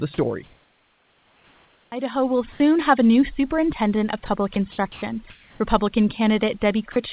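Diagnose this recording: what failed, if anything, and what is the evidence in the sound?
Overdone noise removal in call processing, throughout: the suppressor cuts bands near its noise estimate, leaving a lowered, twinkling background.

Comfort noise in place of the background, likely from discontinuous transmission: 0.44 to 1.92 s becomes steady, featureless noise about 7 dB quieter; 5.3 to 5.6 s is about 2 dB louder.

Onset clipped by the voice detector, likely slow to trigger: at 1.88 s the first 40 ms of speech is replaced by fill, so the word starts abruptly.

Sound dropped by the voice detector, likely mistaking quiet speech for background: brief speech gives way to steady noise at 2.52 to 2.60 s, 4.26 s and 6.92 to 6.96 s.

Sound chopped by the voice detector, likely switching repeatedly: between 4.54 and 5.02 s about 180 ms is filled, making speech choppy.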